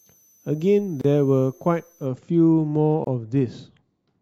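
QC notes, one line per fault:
0.00–2.06 s, switching supply whistle: a thin high whistle sits about 35 dB under the speech, drifting between 6.02 and 6.24 kHz. That's a switching power supply cycling at an audible rate, its pitch shifting as the load moves.
1.01–1.04 s and 3.04–3.07 s, gap at a join of encoded pieces: the speech drops out for 31 ms, then 27 ms, two seconds apart, with smeared edges. It sounds like separately encoded chunks joined untrimmed, leaving encoder delay and padding as silence.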